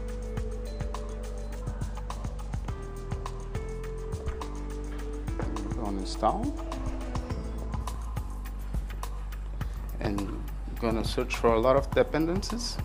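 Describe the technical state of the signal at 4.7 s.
Channel delay (comb filtering) runs from 0.0 to 7.81 s. One channel lags by a tiny fraction of a millisecond, consistent with an offset of about two samples. The mono sum cancels near 10 kHz, giving a dull top end.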